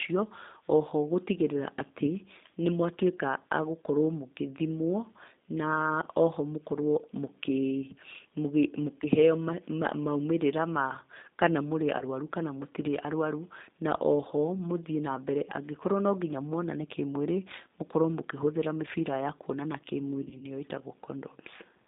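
From start to finish the speech carries G.729 codec damage, and the roughness and band limit point to an 8 kbit/s G.729A link. Nothing passes below about 200 Hz or above 3.7 kHz. Because the decoder rebuilds each 10 ms frame from a vocal tract filter, a pitch predictor and a handful of pulses, the voice sounds plainly rough and synthetic. This is a steady coarseness across the whole clip, unlike the hiss or smeared high end of a simple low-bitrate transform codec.

At 11.99 to 12.04 s comes VoIP packet loss concealed by the speech codec. About 20 ms of audio goes missing, which fits a single lost packet. The decoder fills the gap by stretching its last pitch and filter into a buzzy tone or coloured noise that fades in level, and the voice stays weak or distorted just after. A jitter-buffer dropout would leave silence or a click instead of this tonal smear.

The same packet-loss concealment returns from 20.25 to 20.45 s, with about 60 ms lost in gaps of no more than 20 ms scattered over roughly 160 ms. 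Each gap is patched with a fading buzz or coloured noise. Since every frame is decoded from the one before, the speech sounds weak or distorted after each gap, wavering instead of cutting out cleanly.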